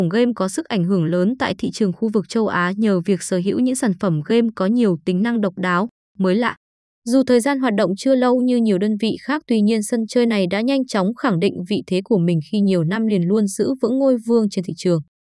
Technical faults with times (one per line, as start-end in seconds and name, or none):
none